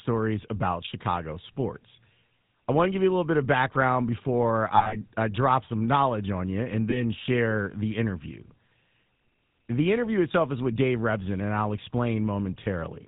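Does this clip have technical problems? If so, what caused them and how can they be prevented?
Yes. Throughout the speech there is the buzzy, gravelly roughness of the GSM full-rate codec, plainly audible and consistent with a 13 kbps GSM full-rate encode. The codec models the vocal tract as a filter and excites it with a regular pulse train that keeps only every third excitation sample, so the voice turns grainy, and nothing above 4 kHz survives. A plain telephone band-limit would sound only dull. This sound is also rough. Prevention: carry the speech on a wideband codec instead of GSM full rate.

There are also lost GSM frames. A scattered cluster runs from 4.76 to 4.96 s, totalling about 120 ms missing over 160 ms with runs of a few tens of milliseconds. Single 20 ms losses occur around 6.90–7.02 s, at 10.32 s and at 12.64 s. Each gap is filled by repeating the last good frame's settings, so the sound briefly hangs as a rough metallic ring. 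A simple dropout would leave silence or a click. Prevention: reduce frame errors on the link with better radio coverage or stronger error protection.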